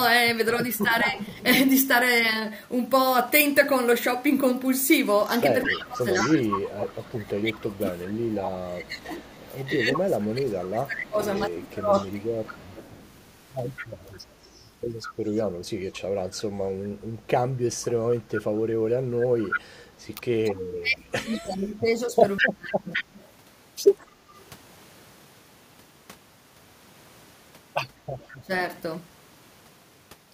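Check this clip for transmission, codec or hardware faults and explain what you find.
Three echo-canceller faults are present in this speech: echo leak, speech suppressed in double talk, and background gated by the echo canceller.

Echo leak occurs at 0.79 to 1.45 s, 5.63 to 24.41 s and 28.19 to 28.28 s. A copy of the voice trails it by about 206 ms. It sits about 10 dB below the speech, falling to about 30 dB below at the end. The likely cause is a loudspeaker echo the far-end canceller failed to remove.

Speech suppressed in double talk affects 0.86 to 1.17 s, 5.65 to 12.6 s, 20.11 to 22.9 s and 28.42 to 28.51 s. The voice dips and drops out in pieces, by roughly 10 to 30 dB at worst. The likely cause is the canceller mistaking overlapping talk for echo and turning everything down.

Background gated by the echo canceller happens at 17.16 to 17.27 s. The room sound falls by about 7 dB for roughly a tenth of a second, then returns. 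The canceller clamped the microphone while the loudspeaker played, then released it.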